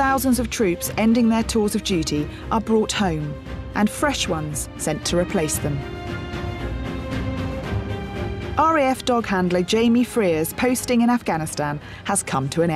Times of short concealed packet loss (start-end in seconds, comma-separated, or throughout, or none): none